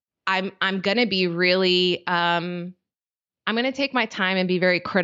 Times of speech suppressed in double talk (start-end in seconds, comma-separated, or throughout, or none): none